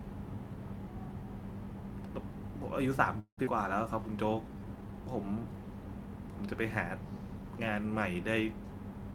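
At 3.19 s the speech stops moving forward and the last sound is carried on as a fading buzz, about 181 ms of fill in all, ending in roughly 80 ms of silence before the talker resumes at 3.40 s. This is a call audio freeze. The likely cause is packets stalling in transit until the jitter buffer emptied, leaving the receiver to extend what it last had. When delivery resumed, playback picked up exactly where it had stopped, so nothing is lost. The pause is simply inserted, and the delay grows by about 181 ms.

Right after, between 3.45 and 3.50 s, comes a skip ahead. Playback jumps forward, dropping about a tenth of a second of speech and bridging the join with only a short 13 ms fill. The backlog left by the freeze meant later audio was already queued, so discarding a stretch let the receiver claw back roughly 100 ms of the 181 ms it had just gained. The result is an abrupt, slightly clipped transition.

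From 4.05 to 4.93 s there is a jitter buffer slow-down. The speech runs at about 88 percent of normal speed while the pitch stays unchanged, with vowels and pauses sounding stretched. The receiver repeated single pitch periods and slivers of pauses to rebuild its reserve, adding 114 ms in total.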